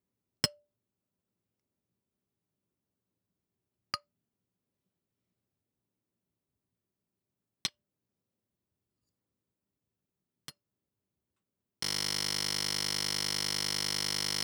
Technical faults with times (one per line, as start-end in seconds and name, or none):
11.83-14.43 system hang loop